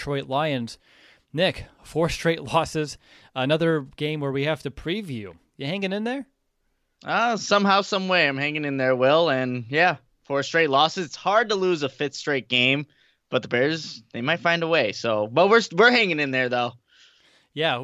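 A speech recording with no audible technical fault anywhere in the signal.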